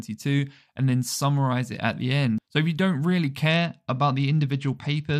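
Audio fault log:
3.52 to 5.20 s, Bluetooth SBC bit pool drop: the treble suddenly dulls and a gritty roughness spreads through the remaining bands to the end, which fits the bit pool falling from 28 to 11, near 90 kbps. The grit distinguishes it from a plain low-pass filter.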